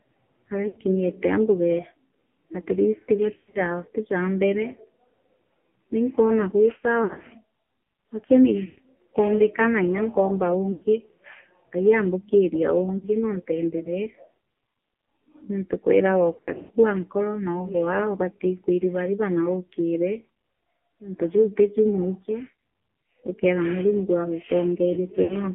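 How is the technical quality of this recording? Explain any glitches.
The recording is heavily degraded by a low-rate mobile voice channel and has eight short dropouts.

The AMR narrowband mobile codec shapes the speech for its whole length. The band runs only from 200 to 3400 Hz, so there is no low body and nothing above 4 kHz. The codec rebuilds the voice from a vocal-tract model and a handful of excitation pulses per subframe. The damage is heavy here: the speech sounds buzzy, synthetic and hollow, which fits one of the lowest AMR-NB modes, around 5.9 kbps.

Lost AMR speech frames occur at 0.68–0.79 s, 3.34–3.61 s, 7.04–7.27 s (just after "naikwona gwi"), 8.66–8.79 s, 10.72–10.84 s (just after "nya nkoomba"), 12.98–13.07 s, 16.36–16.70 s and 25.24–25.35 s. Frames failed their error check, and the decoder filled each gap by repeating the last good pitch and spectral settings at falling gain. 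The shortest loss, about 40 ms, is a brief dip. The 80–120 ms losses smear and fade. At 3.34 s and 16.36 s the losses are scattered over 0.2–0.3 s, giving a warbling, broken stretch before the voice returns rough.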